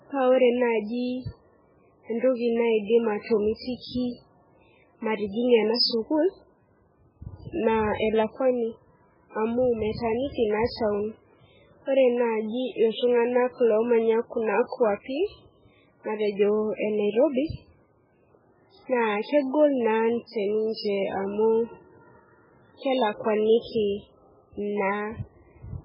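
Throughout the speech, the sound is thin, watery and swirling, with nothing above 5.3 kHz and sibilants turned into metallic chirps. This is likely heavy MP3 compression, at a rate that points to around 8 kbps, so the encoder cuts the treble and drops weak frequency lines from frame to frame.

From 3.78 to 3.84 s and again from 7.95 to 8.00 s, a brief hiss leads into a sharp onset, which then sounds softened. This is pre-echo: the codec spreads noise meant for the loud attack across its whole block, smearing it about 55 ms and 50 ms earlier.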